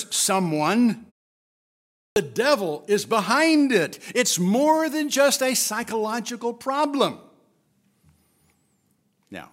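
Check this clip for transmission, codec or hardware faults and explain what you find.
One fault stands out in this speech: a clipped start after a pause at 2.10 to 2.16 s. After roughly a second of silence, the playback device appears to have dropped into a low-power or unlocked state and needed time to come back. About 62 ms of the returning speech was swallowed while it recovered, so the sound jumps in abruptly out of the silence with its opening consonant or onset missing.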